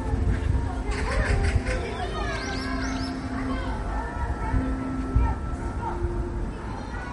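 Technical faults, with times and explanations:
Throughout: MP3 compression, likely. Nothing is heard above 11.2 kHz, a hard treble ceiling of the kind an encoder imposes when bits are scarce, which fits a low rate of around 48 kbps. The damage is plainly audible: with too few bits to go round, weak frequency lines are zeroed in some frames and kept in others, so quiet detail flickers in and out with a watery, swirling texture, and sharp onsets lose their edges.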